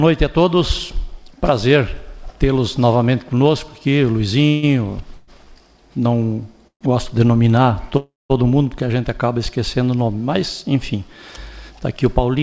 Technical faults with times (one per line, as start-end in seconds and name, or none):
4.48-4.65 call audio freeze
5.15-5.30 call audio freeze
6.67-6.83 call audio freeze
7.97-8.32 call audio freeze